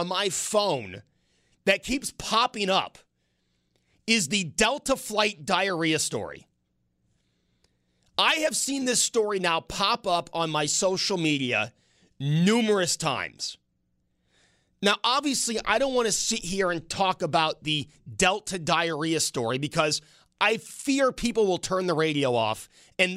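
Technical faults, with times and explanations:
No technical faults are audible anywhere in the recording.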